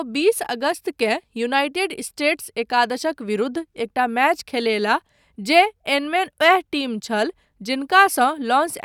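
No technical faults are audible.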